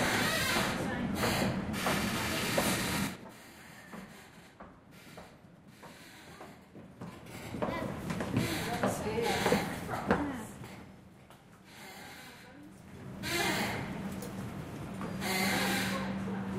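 Zipper noise runs from 12.63 to 13.40 s. The level shifts by about 15 dB in unsmoothed steps of about 2 dB, roughly ten a second. Each jump leaves a small click, so a ticking zip rides on the sound.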